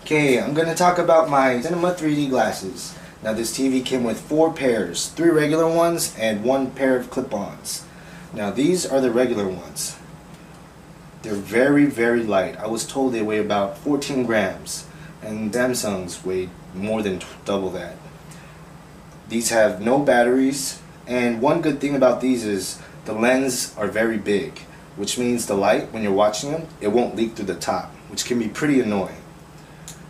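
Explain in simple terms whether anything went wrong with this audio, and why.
Around 15.53 seconds there is a CD skip: the player's laser was knocked or hit a flaw on the disc and lost its place on the spiral track, landing on another turn. The player goes silent for a split second, only a few thousandths of a second, then carries on from that new spot. You hear a small tick, and the sound jumps abruptly to a different point instead of flowing on smoothly.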